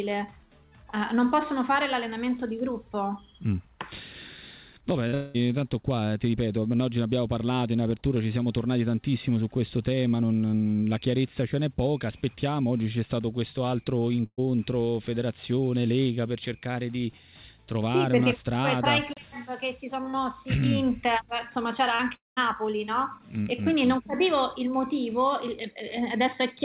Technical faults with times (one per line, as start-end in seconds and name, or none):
5.08-5.14 short concealed packet loss
5.14-5.36 long network dropout
14.26-14.40 burst of packet loss
21.96-22.01 short concealed packet loss
22.15-22.39 long network dropout